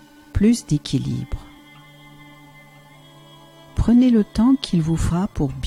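At about 1.58 s and again at 5.10 s there's a tiny blip from damaged data in a compressed stream: the decoder misreads corrupted frames, briefly losing sync.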